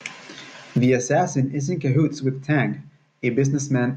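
No audible technical faults here.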